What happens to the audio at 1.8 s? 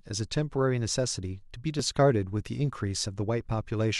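At 1.79 s the speech skips forward, the sound of a dropped buffer (overrun). Only a few milliseconds of audio are missing, and the two sides of the cut butt straight together. The likely cause is that the recording software fell behind and the hardware overwrote a block of samples before they were read. Unlike a dropout, there is no gap of silence, just an instant jump.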